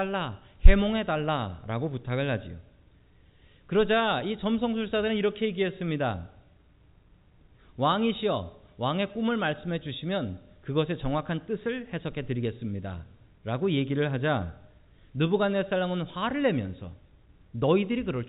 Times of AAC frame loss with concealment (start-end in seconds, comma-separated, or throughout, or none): none